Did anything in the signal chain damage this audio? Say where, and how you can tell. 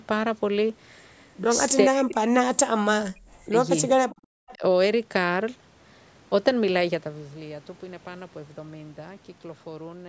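Yes, the damage happens at the call-processing stage. The speech drops sharply from 1.86 to 2.47 s and from 2.74 to 3.56 s, by roughly 40 dB at its deepest, with a shallower dip of about 10 dB at 4.56 to 4.62 s. This is likely speech suppressed in double talk: the echo canceller mistook overlapping far-end audio for echo and attenuated the near-end talker with it.

A faint delayed copy of the speech appears at 4.08 to 4.15 s and again at 4.48 to 4.55 s. It trails the original by 406 ms and sits about 20 to 25 dB below it. This is likely echo leak, where residual loudspeaker pickup escaped the canceller and was sent back.

The room sound dips by about 9 dB from 4.15 to 4.28 s, then recovers. This is background gated by the echo canceller: its suppressor clamped the microphone while the loudspeaker path was active, pulling the noise floor down with it, then released.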